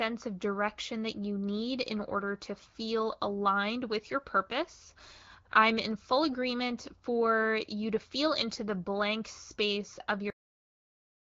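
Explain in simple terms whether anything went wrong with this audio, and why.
The recording has a cut-off end: at 10.30 s the speech stops mid-sound and drops straight into dead digital silence, with no natural fade. The final stretch of audio was never written out, so the recording simply ends early.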